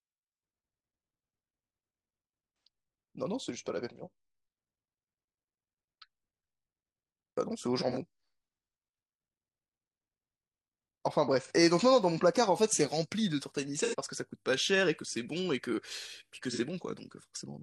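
There's AAC frame loss with concealment five times in this speech: at 2.66 s, 7.90–7.97 s, 11.41–11.52 s, 13.77–13.95 s and 16.52–16.59 s. The gaps run about 43 or 85 ms, which fits one or two lost frames. Each time, the decoder patched over the hole by reusing the last good spectrum. None lasts long enough to fade to silence, so you just get a brief smeared, noisy or phasey blur where the speech should be.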